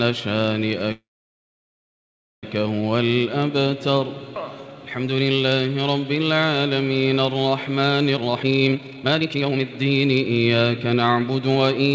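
From 0.92 to 2.45 s there is a call audio freeze, likely caused by delayed packets draining the jitter buffer. The last sound is briefly stretched into a fading buzz or hiss and then gives way to about 1.4 s of silence. On a waveform this shows as a short decaying tail followed by a flat line. The audio then resumes where it stopped, with nothing lost, but it now runs about 1.5 s later.

From 8.14 to 11.87 s, jitter buffer speed-up plays the audio at about 140% speed with unchanged pitch, trimming roughly a second and a half by repeatedly cutting out pitch-period-length slices. It sounds hurried. On a spectrogram, events are packed closer together in time while the harmonic spacing stays the same.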